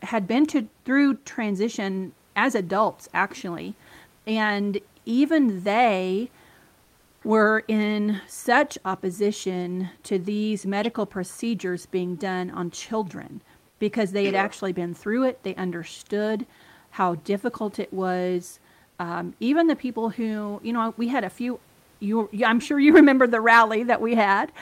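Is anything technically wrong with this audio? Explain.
Yes, there are two kinds of fault: comfort noise standing in for the real background, and hard clipping.

Comfort noise in place of the background occurs at 4.17–4.25 s just after "transition as adults actually", 6.83–7.21 s, and 13.71–13.79 s between "being done on children" and "because they had actually". During these pauses the sender likely stopped transmitting under Opus DTX, so the receiver filled the gap with synthetic noise. The real room noise, about 39 dB below the speech, gives way to a flat, featureless hiss roughly 1, 3 and 4 dB quieter.

Hard clipping occurs at 22.95–23.00 s after "you I'm sure you", and again at 23.49–23.60 s. The peaks were driven about 4 dB and about 3 dB beyond what the signal path could pass, so the waveform was cut flat. The squared-off tops add high harmonics, heard as a brief harsh crackle on those loud syllables.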